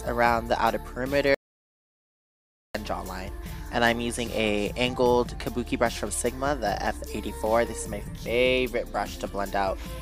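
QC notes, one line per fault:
1.35–2.75 s, audio dropout to silence: the sound cuts off mid-flow and resumes after 1.40 s of total silence with no room tone, likely from lost input through a disconnected device, failed link or stray mute. Waveform: flat line. Spectrogram: blank vertical band.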